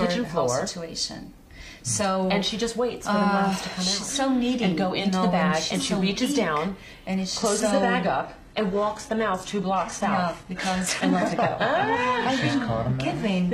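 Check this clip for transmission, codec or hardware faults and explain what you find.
One fault is present. From 7.38 s to the end, the adaptive stream drops to a lower bitrate. A slowed connection forced a switch, and the abrupt, gapless loss of treble above 12.3 kHz, with added synthetic artefacts, fits low-bitrate HE-AAC.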